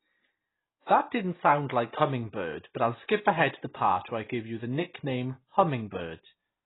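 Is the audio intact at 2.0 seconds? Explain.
No. AAC compression damage runs through the whole clip, 2.0 seconds included. Nothing sounds above about 3.9 kHz, so the speech is dull and smeared, with a fizzy warble on sibilants. This likely comes from AAC-LC coding at a very low bitrate, around 16 kbps, which cuts the top band and thins the rest.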